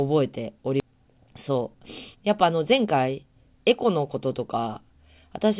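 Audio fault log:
0.80–0.82 s, skip ahead: the speech jumps forward with no filler and no gap, about a second of audio missing. That stretch was dropped while later audio was already queued, so the two sides of the cut join almost directly.
0.84–4.17 s, jitter buffer speed-up: the speech runs at about 113% of normal speed with its pitch unchanged, sounding hurried. The buffer was draining excess delay by cutting short pitch-period pieces repeatedly, around 0.4 s in total, over this narrowband call audio cut off above 4 kHz.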